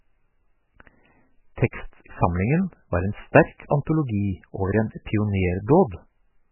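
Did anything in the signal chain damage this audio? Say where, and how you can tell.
Yes. The damage sits at the codec stage and runs through the whole speech clip. Nothing comes through above 3 kHz, so the top is cut flat. The sound is watery and swirly, with heavy damage throughout. This is likely MP3 compression at a very low bitrate, which fits around 8 kbps. Short of bits, the encoder drops the treble at a fixed point. It also zeroes weak frequency lines, which flicker on and off between frames, and the attacks smear.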